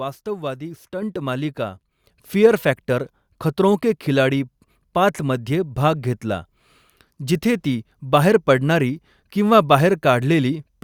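The call software judged the microphone too quiet and twice raised its input volume in a single step: the microphone volume stepped up at 1.02 s by about 6 dB, then at 2.04 s by about 5 dB. Each time the speech and background noise jump louder together.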